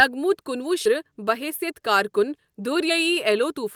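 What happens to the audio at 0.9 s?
At 0.85 to 0.87 s there is a skip ahead. Roughly seven-tenths of a second of speech is missing, and the sound on either side of the jump is joined almost directly with no silence inserted. That is what distinguishes it from a dropout, which leaves an audible hole or a filled gap. Here the audio simply jumps forward. A stretch was dropped, on the way or by the overflowing jitter buffer, while newer audio was already queued, so the delay dropped by about the same amount.

Starting just after, from 0.96 to 2.20 s, comes a jitter buffer speed-up. The buffer was still holding more audio than its target, so it trimmed many short slices, each one or a few pitch periods long, and removed about a tenth of a second in total. Speech runs at 108% of normal speed and sounds hurried while the pitch stays the same. A fault that plays the audio faster would raise the pitch too, and the unchanged pitch here is what sets this apart.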